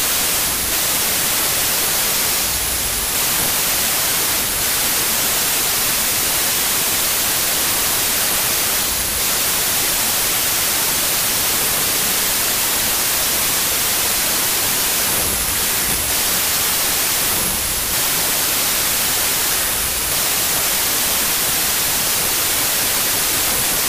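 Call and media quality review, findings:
Wrong sample width, whole clip: loud hiss with the real sound buried underneath, slowed to 0.75x with pitch dropped to match. Probable component: file reader or format negotiation. Fits 32-bit samples being unpacked as 24-bit, so most values are stitched from mismatched bytes and only a few keep the signal's top bits. The 4-to-3 byte mismatch explains the 0.75 speed.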